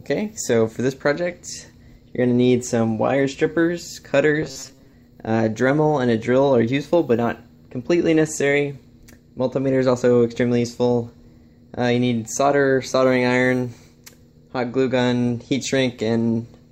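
At 1.32 s there is a brief gap from lost LE Audio frames. The dropout lasts about 7.5 ms, which fits a single lost frame. The LC3 decoder fills it by reusing the last spectrum with random signs. It sounds like a tiny noisy smear.

From 4.42 to 4.93 s the sound turns into a rigid, metallic buzz at 134 Hz. The likely cause is robotic sound from repeated short buffers. That pitch fits a buffer of about 7.5 ms being replayed. Roughly half the audio is repeats, so real audio is skipped.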